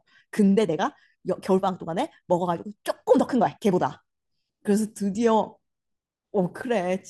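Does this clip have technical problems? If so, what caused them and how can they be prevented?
Yes. From 0.0 to 3.8 s the speech runs 1.5 times faster at unchanged pitch, a time-stretched section, likely squeezed by dropping short pieces, so it sounds rushed. A spectrogram shows compressed syllables with unchanged harmonic spacing. Trim content instead of time-compressing.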